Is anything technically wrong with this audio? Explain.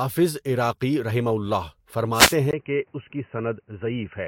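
Yes, three separate problems turn up in this speech clip.

At 0.74 to 0.77 s, just before "رَحِمَہُ اللہ", there's a corrupt frame decoded: damaged bits in one compressed frame got played anyway, so energy landed at the wrong frequencies for that frame. You hear a brief, faint blip, well down in level.

From 2.13 to 2.36 s, right after "رَحِمَہُ اللہ", there's a wireless microphone noise hit. The radio signal from an FM mic faded as reflections cancelled, letting receiver noise rise over the speech, so you get a short swish of static lasting about a quarter of a second.

At 2.51 s the sound drops out for 20 ms, then stays dull and boxy to the end, with nothing above 3 kHz, a slightly lower level and a faint new noise floor well below the speech. That's likely the input switched to a poorer device, a narrower-band microphone or headset taking over mid-recording.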